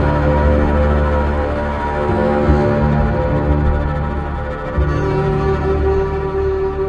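No technical fault can be heard anywhere in the audio. Nothing in it calls for a time, a value or a cause.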